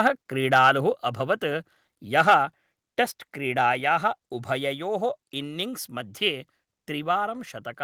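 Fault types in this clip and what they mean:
Microphone volume stepped down: The speech and the background behind it drop in level abruptly, with no fade, at 1.02 s by about 4 dB and again at 2.22 s by about 2 dB. The second drop lands in the middle of a distorted peak. The likely cause is the call software judging the microphone input too hot and cutting the device's input volume in a single step each time.
Microphone overload: From 2.18 to 2.34 s the loudest part of the speech turns harsh and crackly, pushing about 4 dB past what the signal can hold. A small share of samples are flattened at the converter's limit. The likely cause is an input volume set too high, so the tops of the waveform are chopped off at the converter's limit, which produces that gritty edge.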